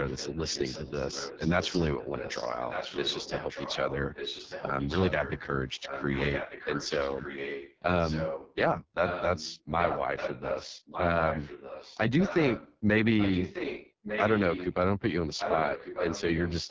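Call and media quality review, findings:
AMR wideband (HD Voice) codec, 0 to 17 s throughout: rough, raspy speech texture, consistent with AMR-WB at its lowest 6.6 kbit/s mode, heavy coding damage.

Pulse-excited vocal tract model starved of bits; content above 6.4 kHz is synthetic shaped noise. Differs from clipping or line noise: the grit follows the speech itself, present at every level, not only peaks or pauses.

Echo leak, 0.04–5.39 s, 5.82–8.55 s, 9.06–12.77 s, 13.17–14.74 s, 15.37–16.71 s: delayed second copy of the talker, fixed 1.2 s lag, roughly 10 dB below the speech in the first two spans, about 5 dB below from 9.06 s onward.

Likely far-end loudspeaker pickup that the echo canceller failed to remove. Unlike room reverb, the copy is discrete, not a smeared tail. The long constant delay also rules out local acoustics.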